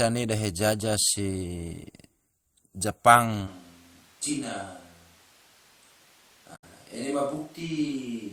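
At 3.49 s the close microphone's feed likely drops out and the recording falls back to a distant pickup, which stays in place to the end. The speech turns roomy and hollow, thinner in the bass, about 5 dB quieter, with room noise sitting only about 25 dB below it.

From 6.52 to 6.64 s, damaged data in the compressed stream makes the decoder misread frames, lose sync and hunt for the next valid header. The result is a brief glitch.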